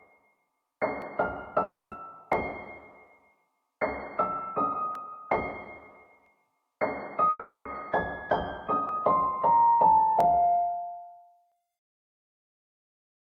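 Starting at 1.02 s and running to 12.84 s, the playback and capture sides are likely on separate clocks that disagree by roughly 700 ppm. The buffer between them drifts until a block of a few dozen samples is dropped or repeated. These clock drift buffer slips recur every 1.31 s, about ten in all, each heard as a click or pop in the sound at a steady beat.

At 1.63 s a long network dropout likely cuts off the incoming stream. The receiver stretches the last sound into a fading buzz, which gives way to about 0.2 s of silence before the audio returns at 1.93 s with 280 ms never played. A second dropout at 7.29 s behaves the same way: a decaying fill, roughly 0.13 s of silence, and a resumption at 7.67 s with 360 ms missing.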